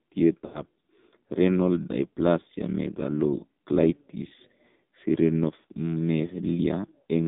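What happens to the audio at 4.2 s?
At 4.2 s the speech is still passing through an AMR narrowband mobile codec, which runs the whole clip. The codec rebuilds the voice from a vocal-tract model and a handful of pulses per 5 ms subframe, and at this heavy level of damage the sound points to a low bitrate of around 5.9 kbps. The band is cut to roughly 150 Hz to 3.7 kHz, so the speech sounds thin, boxy, buzzy and synthetic.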